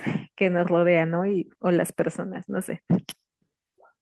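No technical faults are audible.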